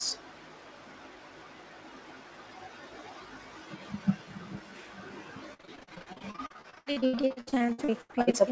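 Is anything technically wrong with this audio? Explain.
Yes. From 5.54 s to 8.35 s the clip suffers repeated packet loss, giving a robotic sound. Audio packets went missing or arrived too late dozens of times in that stretch, with holes up to 80 ms long. Each hole was patched by extending the preceding sound, so about 44% of the span is filled-in material rather than real speech. The speech turns choppy there. The 8 kHz bandwidth ceiling points to a G.722 call codec.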